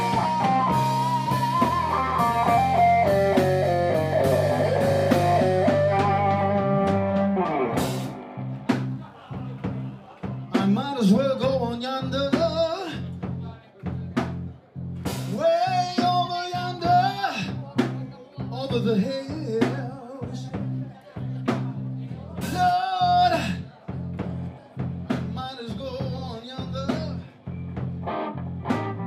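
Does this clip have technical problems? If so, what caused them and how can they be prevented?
Yes. Mains buzz from 8.69 to 10.19 s. Sharp switching spikes from a dimmer, a rectifier or an unshielded connection leaked into the signal path twice in every 50 Hz cycle. The result is a steady, raspy buzz of 50 Hz harmonics, sitting faintly beneath the audio. Using shielded cabling and keeping audio lines away from dimmers and power supplies prevents it.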